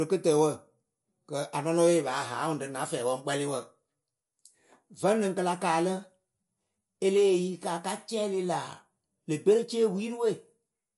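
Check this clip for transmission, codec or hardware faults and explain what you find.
One codec fault runs through the whole recording. MP3 compression is audible for the full length of the speech: the sound is likely MP3-coded, with nothing above 11.3 kHz, which fits a low bitrate around 48 kbps. Short of bits, the encoder cut the treble at a fixed point and dropped weak frequency lines frame by frame, leaving plainly audible watery, swirly artefacts and dull, smeared consonants.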